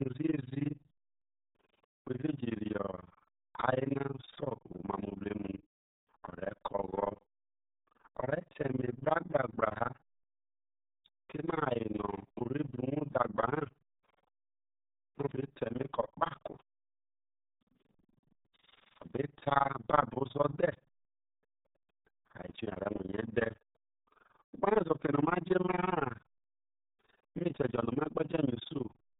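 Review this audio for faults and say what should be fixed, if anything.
The whole clip has an overlap-add ripple. The level pumps up and down around 20 times a second, and the dips go very deep, about 60 dB, so the speech doesn't just wobble. It chops into a hard, robotic flutter. That happens when audio is split into windowed frames and stitched back together with windows whose overlaps don't add up to a steady gain, so every frame boundary dips. Fix it by using a window and hop size pair that satisfies the constant-overlap-add condition, or by normalising by the summed window envelope.

The clip also carries heavy RealAudio 14.4 codec damage from start to finish. Nothing above 3.8 kHz survives, so the speech sounds boxed-in and muffled, and the coder's crude modelling adds a gargly, bubbling texture. That bandwidth and grit point to the roughly 8 kbit/s budget this dial-up era codec was built around, which just can't carry full-band speech. 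Prevent it by going back to an uncoded source, or by delivering through a modern wideband codec at a sensible bitrate.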